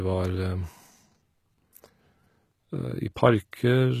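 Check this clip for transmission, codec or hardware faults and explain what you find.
One codec fault runs through the whole clip. It sounds like HE-AAC compression. The damage is plainly audible from start to end. The likely cause is a low-rate HE-AAC encode, and the sound fits a bitrate near 20 kbps. At that rate only the lower spectrum is truly coded. The treble is rebuilt by copying lower bands upward under a coarse envelope. The top end stays bright but is not the real signal. Its harmonics do not line up with those below. S sounds come out gritty, metallic or lispy.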